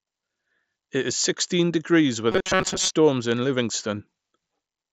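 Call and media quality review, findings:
Robotic sound from repeated short buffers, 2.32–2.92 s: rigid metallic buzz at 188 Hz. Likely buffer underrun, with roughly half the audio replaced by repeats of the last 5.3 ms. Speech band-limited to 8 kHz with light grain, consistent with an mSBC headset link.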